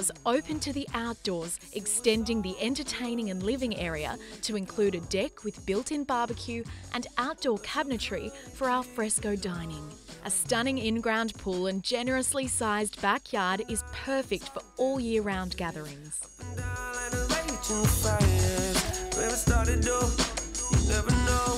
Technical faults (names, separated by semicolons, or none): none